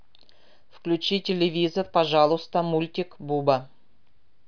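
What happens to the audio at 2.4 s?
Nothing goes wrong at 2.4 s; the speech runs on intact through that moment, with no dropout, click or distortion to be heard.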